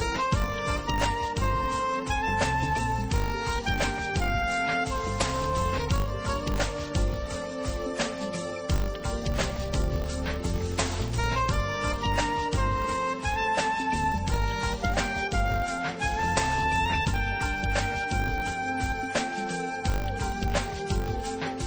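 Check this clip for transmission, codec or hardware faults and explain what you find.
One fault runs through the whole clip: a filter restarted on every block. From start to finish, a processing filter loses its internal state at each block boundary and begins again from silence, so every block opens with a small transient. Those transients recur at 50 Hz, which points to blocks about 20 ms long. The result is a steady 50 Hz buzz or ticking that rises and falls with the level of the sound, louder in loud passages and fading in quiet ones.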